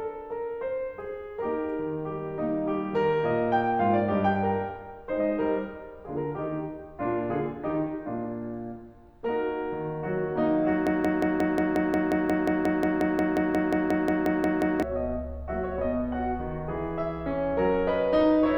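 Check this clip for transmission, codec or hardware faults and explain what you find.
A broken-record loop affects this music clip. From 10.87 s to 14.83 s, a fragment about 0.18 s long repeats exactly, back to back, 22 times, giving a rigid mechanical pulse. The player, encoder or stream likely stalled and kept resending the last piece it held, so the music due in those four seconds never arrives. Unlike an echo or delay effect, each repeat is identical and never decays, and playback resumes further on.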